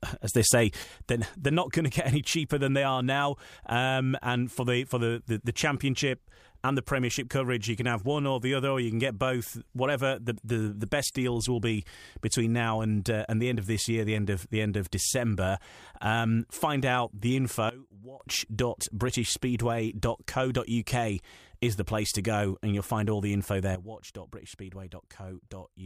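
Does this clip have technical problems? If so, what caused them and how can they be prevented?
Yes, there are three sudden gain jumps in this speech. From 0.35 to 0.84 s the level leaps up by about 6 dB, from 17.69 to 18.20 s it drops by about 19 dB, and from 23.75 s to the end it drops by about 12 dB. Speech and background noise step together each time, so it's likely a digital gain change applied between samples with no ramp. To prevent this, smooth every gain change over a few milliseconds.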